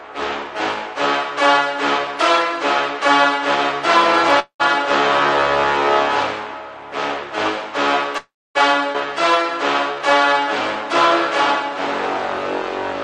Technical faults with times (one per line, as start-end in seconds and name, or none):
4.39-4.62 call audio freeze
8.18-8.57 call audio freeze
8.93-8.96 skip ahead
9.95-10.89 jitter buffer slow-down